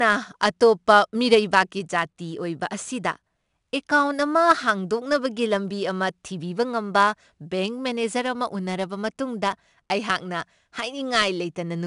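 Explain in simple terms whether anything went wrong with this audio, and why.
4-bit ADPCM compression runs through the whole clip. Each sample is saved as a small 4-bit step from a guess, so every loud moment carries a plainly audible gritty hiss, sharp starts sound roughened, and nothing above 10.6 kHz remains, dulling the speech.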